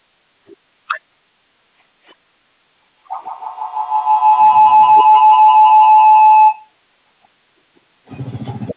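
From 2.96 s to 6.77 s, a microphone-to-loudspeaker loop in the room gained level on each pass, causing feedback howl: repeats about 150 ms apart build instead of fading, narrowing to a tone near 1 kHz that peaks about 17 dB above the speech.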